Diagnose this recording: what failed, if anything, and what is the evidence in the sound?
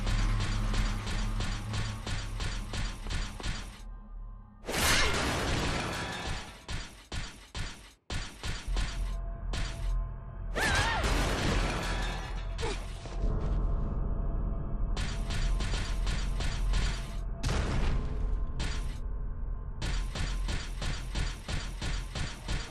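Nothing failed; no fault is audible anywhere.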